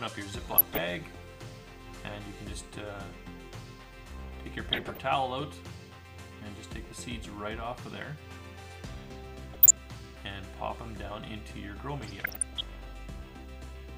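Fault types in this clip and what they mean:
DAB burbling: weak reception lets bit errors slip past error correction and corrupt MP2 scale factors and samples, putting short noise blips in single sub-bands and making sub-bands jump in level for up to a frame. Four short bursts of burbling result, the longest near 12.0 s.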